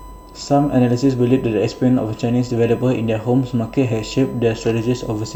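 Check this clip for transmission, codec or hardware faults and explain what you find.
There is one hardware fault: a steady whine runs under the speech for the whole clip.

From start to finish, a thin, fixed-pitch tone sits at 1 kHz, its strongest component, roughly 25 dB below the speech level. This is USB whine. The USB bus draws current in bursts timed to its 1 ms frames, and that 1 kHz ripple leaks into the audio path through shared power or ground wiring, so it shows up as a constant whistle that never changes pitch.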